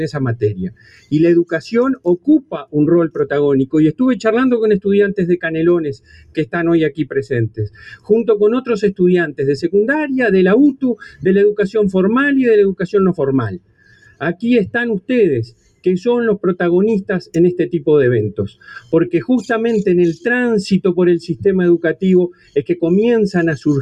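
A speech noise suppressor applied to music or sounds is active throughout. It mistakes steady tones and decaying tails for noise and pulls them down by roughly 15 dB, so the level pumps and thins. Unlike a gate or dropout, attacks mostly still come through.

The suppressor cuts sound hardest from 0.69 to 3.74 s, 5.44 to 8.1 s, 9.29 to 9.69 s, 10.74 to 11.26 s, 13.49 to 14.43 s, 15.0 to 15.86 s, 18.49 to 18.93 s and 21.95 to 22.56 s, with drops of about 19 to 20 dB. Held sounds sink while onsets survive, which sets this apart from plain compressor pumping.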